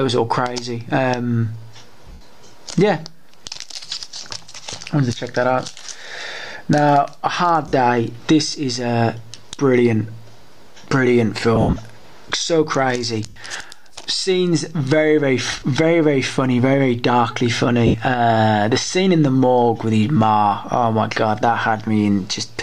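Lost LE Audio frames break the Bluetooth link six times: 2.07–2.21 s, 7.68–7.73 s, 11.56–11.76 s, 13.26–13.40 s, 15.52–15.62 s and 17.87–17.94 s. Each time, the LC3 decoder fills the missing 10 ms frames by repeating the last spectrum with scrambled signs, so tonal content collapses into a brief noisy smear. The longest gaps, near 2.1 s and 11.6 s, sound like a hiss that sags in level.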